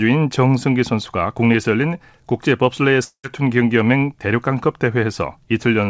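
At 3.04 s the speech suddenly gives way to a buzzy, smeared tail that fades out, followed by a brief gap of near silence of about 80 ms. When it picks back up at 3.26 s, roughly 200 ms of speech is gone. That's the classic long network dropout, likely a run of packets that never arrived. The receiver covered the hole by stretching the last sound for about 196 ms, and then resumed with the lost part missing. Band-limited at 8 kHz, the audio fits a G.722 call path.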